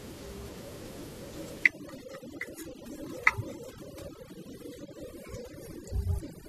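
Speech with room noise sitting about 23 dB below the voice shows overdone noise removal from 1.64 s to the end: background drops and breaks up into twinkling specks, and the spectrogram shows scattered isolated time-frequency dots and gaps where quieter speech bands were gated away.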